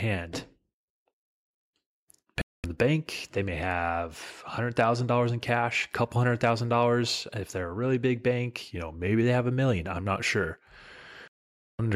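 A speech clip with two digital broadcast dropouts: the sound mutes from 2.42 to 2.64 s, returning at "the bank they may", and again from 11.28 to 11.79 s. The receiver silenced output while frames were missing or corrupt, losing 224 ms and then 512 ms of programme. Between "they're a really big" and "they have a million", from 8.68 to 9.23 s, speed and pitch drop together by about 5.3% and 95 cents, nearly a semitone, then snap back. This is likely a drift correction step, where clock-matching software briefly changed the playback rate to rebalance its buffer.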